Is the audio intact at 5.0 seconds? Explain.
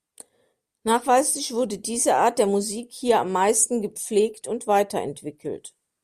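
Yes, the speech at 5.0 seconds plays through intact, with no dropout, click, distortion or other fault at that moment.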